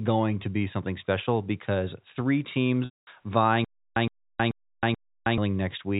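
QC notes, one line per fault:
2.85–3.07 s, packet loss with pitch repetition: right after "something special because three", the last pitch period is held and buzzes, then fades to silence across a 220 ms gap before a short cross-fade back, with no repeated burst.
3.65–5.38 s, stutter with silent gaps: a 116 ms fragment replays four times, every 433 ms, with about 317 ms of digital silence between, likely a stalled stream retrying. The repeats are identical, not a fading held pitch.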